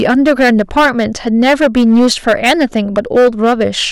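From the first syllable to the end, the speech is hitting hard clipping. The signal's being driven about 9 dB past what some stage in the chain can pass, so the peaks just get sheared off flat, and around a tenth of the waveform ends up squared off like that. Those flat tops spray harmonics way up the spectrum, which is why every louder stretch of the speech comes through with a harsh, buzzy fuzz rather than just the odd crackle on a peak.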